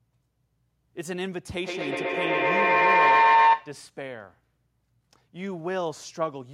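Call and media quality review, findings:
Feedback howl, 1.64–3.87 s: tone near 1 kHz, pulsing about every 100 ms, peaking about 12 dB above speech. Acoustic loop between two co-located call devices, gain exceeding unity.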